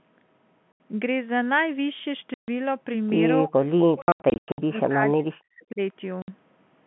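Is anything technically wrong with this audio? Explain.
Yes, the speech has two kinds of fault.

Packet loss filled with silence occurs at 0.72 to 0.80 s (80 ms), 2.34 to 2.48 s (140 ms), 4.02 to 4.58 s, and 6.22 to 6.28 s (60 ms). In the 4.02 to 4.58 s stretch, about 360 ms of gaps are scattered over 560 ms, and the longest single gap is 100 ms. Each gap is a whole multiple of 20 ms, which fits 20 ms packets. The receiver plays silence in place of the missing audio, so the speech stops abruptly at each hard edge.

The second fault is suppression of the speech at 3.44 to 3.53 s and from 3.83 to 5.8 s. The level falls by about 30 dB in the first dip. In the longer stretch it falls by up to about 40 dB, in pieces that add up to roughly one and a half seconds. The likely cause is speech suppressed in double talk. When both ends talk at once, the echo canceller cannot separate the near talker from the loudspeaker echo and attenuates both. 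This overlaps the scattered packet loss between 4.02 and 4.58 s.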